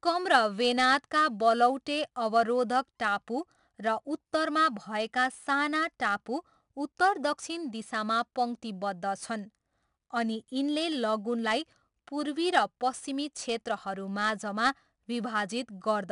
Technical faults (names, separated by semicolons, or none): 4-bit ADPCM compression